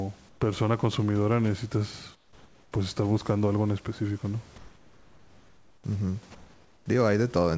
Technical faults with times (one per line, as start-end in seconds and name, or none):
0.29-0.41 comfort noise in place of the background
2.15-2.72 comfort noise in place of the background
4.58-5.84 comfort noise in place of the background
6.35-6.86 comfort noise in place of the background